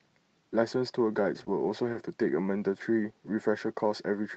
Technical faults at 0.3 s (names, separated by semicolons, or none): none